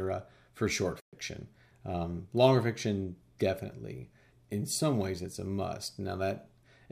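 At 1.00 s the speech drops to silence until 1.13 s, then resumes as if it had played on. A Bluetooth dropout is the likely cause, which fits about six lost packets.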